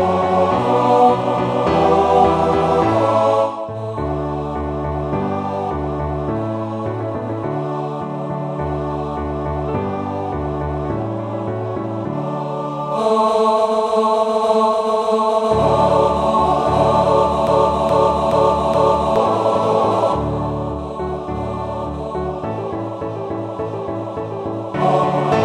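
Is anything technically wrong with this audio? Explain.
Yes. From 17.47 to 19.16 s, a broken-record loop repeats a 0.42 s fragment four times. A stalled player or stream likely resent its last buffer, replacing the audio meant for that stretch.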